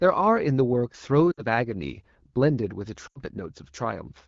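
Lost AMR speech frames at 1.31 to 1.42 s and 3.08 to 3.19 s: the wideband decoder concealed each gap by reusing its last good pitch and vocal tract settings with falling gain, so the speech smears and fades for about 60 ms, then 80 ms, before returning rough.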